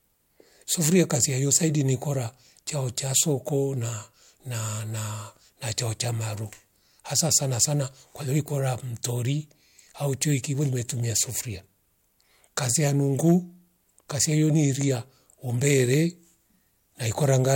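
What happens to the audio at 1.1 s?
Hard clipping runs from 0.85 to 1.57 s, so 1.1 s falls right inside it. The speech there is driven about 6 dB beyond what the signal path can carry, and every peak that exceeds the ceiling is sliced off flat. Those squared-off tops spray harmonics high up the spectrum, giving crackle on the peaks. The distortion clears just before "ni kora tchachao".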